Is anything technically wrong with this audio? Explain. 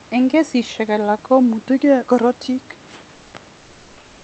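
Yes. Comfort noise replaces the background from 3.57 s to the end. Once speech stops, the sender likely switched to discontinuous transmission, as Opus DTX does. For the final 0.67 s the receiver substitutes synthetic noise, so the real room background, about 31 dB below the loudest speech, becomes a flat, featureless hiss about 3 dB quieter.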